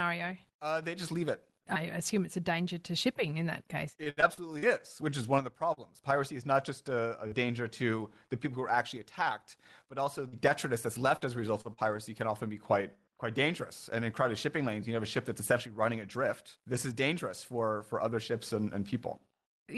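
Repeated packet loss (robotic sound) runs from 4.03 to 4.65 s. Five gaps, the longest 69 ms, were patched by extending the previous sound, so about 27% of that stretch is filled in and sounds choppy.

Jitter buffer slow-down overlaps it from 4.42 to 5.23 s, ending just before "one of the". The receiver repeated pitch periods to rebuild its reserve, adding 52 ms. Speech runs at 94% speed with the same pitch and sounds drawn out.

Scattered short gaps follow from 5.73 to 7.35 s, between "one of the" and "to the people who". Around three isolated losses, none much over 40 ms, were bridged, leaving brief hiccups in otherwise clear speech.

Repeated packet loss returns from 10.28 to 11.81 s. Five concealed gaps, the longest 45 ms, cover about 11% of the span and sound choppy.

Jitter buffer speed-up runs from 13.90 to 15.56 s, after "be quite quite dangerous" and before "running adrift". To shed excess delay, the receiver cut roughly 40 ms of pitch periods, so speech runs at 102% speed.

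Throughout, the call path's coding noise and treble ceiling near 12 kHz fit Opus at about 20 kbps.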